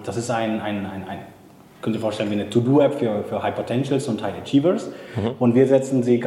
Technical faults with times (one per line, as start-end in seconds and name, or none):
none